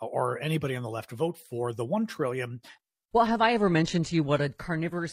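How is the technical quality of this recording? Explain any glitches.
The quality drops partway through. Adaptive stream at a lower bitrate, from 2.47 s to the end: the connection slowed, so the player switched suddenly and without a gap to a leaner stream. The treble stops near 14.9 kHz, codec artefacts rise, and the change fits a switch from AAC-LC to a low-rate HE-AAC encoding.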